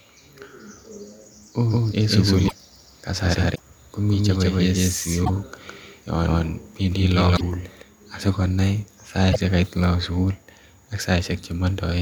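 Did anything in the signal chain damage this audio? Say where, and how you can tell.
Yes. From 1.71 to 7.82 s a doubled audio track runs underneath: a second, full-band copy trails by about 150 ms at roughly the original level, dry, starting and stopping abruptly. The likely cause is a slower second capture path feeding the same mix.

Codec stage: at 2.47, 3.54, 5.24, 7.36 and 9.31 s the sound skips ahead with a brief chirp, noise burst or gap lasting about two 26.1 ms frames. That points to a likely broken MP3 bit reservoir, where frames after a cut fetch the wrong borrowed data.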